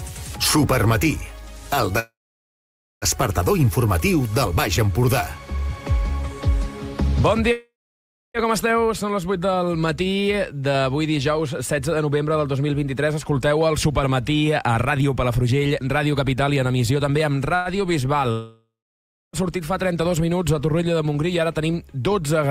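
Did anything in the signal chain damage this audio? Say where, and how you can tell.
Yes. The damage happened on the network side of a call, at the receiver's jitter buffer.

There are three call audio freezes. The first runs from 1.99 to 3.05 s, the second from 7.52 to 8.37 s, and a short one from 17.55 to 17.68 s. In each, the last sound carries on as a fading buzz or hiss. In the first two it then drops to silence for about 0.9 s and 0.63 s. The third lasts only 0.1 s. The audio resumes exactly where it stopped, so nothing is lost. Each pause likely comes from held-up packets draining the buffer.

A jitter buffer speed-up runs from 13.87 to 17.37 s. The audio plays at 108 percent speed, but the pitch stays the same. It sounds hurried. The receiver had built up too much delay. It cut many short slices, each one or a few pitch periods long, and removed roughly 0.3 s in total.

A long network dropout runs from 18.31 to 19.36 s. 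The sound continues as a fading buzz or hiss, then about 0.63 s of silence follows. When the audio returns, it has jumped ahead. About 1.0 s of material is gone for good. This is likely a stretch where no packets arrived at all.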